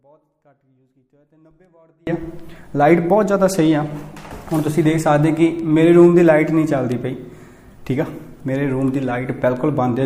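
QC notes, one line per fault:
0.00–2.07 s: audio dropout to a faint residue. The clip opens already inside the dropout. For the first 2.07 s the wanted signal is gone and only faint sound remains, about 40 dB below its normal level. At 2.07 s the full signal snaps back in abruptly rather than fading up. The residue under the gap suggests the path downstream stayed live while the source feed was likely interrupted upstream, leaving only a faint residue until the connection restored.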